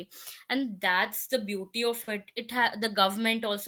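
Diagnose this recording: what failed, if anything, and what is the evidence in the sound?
A short stall from a late packet at 2.03 to 2.09 s, just after "that's the beauty of", points to the network stage. The jitter buffer ran dry, so the receiver held the last sound for about 40 ms, then resumed where it left off. Nothing was lost, but playback now runs 40 ms later.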